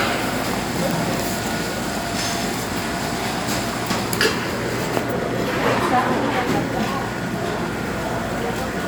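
A sound recording with no audible technical faults. Nothing in what can be heard points to a problem in how it was captured, processed or played back.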